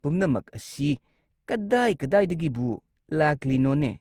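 From start to finish the speech carries a swirly, hollow smear, with consonant attacks blurred and a watery texture under the voice, though content reaches up to about 20.2 kHz. This is generation loss: the audio was likely decoded and re-encoded around seven times with Opus, at what sounds like 64 kbit/s. Each pass quantised again on a shifted frame grid, so noise built up beyond what one encode at that rate would give.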